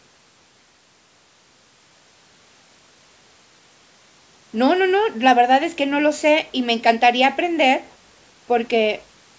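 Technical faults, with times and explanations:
No technical faults can be heard in this speech.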